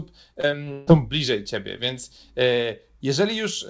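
From 0.34 to 0.89 s, just before "bliżej ciebie", the speech turns choppy: repeated packet loss, with five gaps patched by stretching the preceding sound.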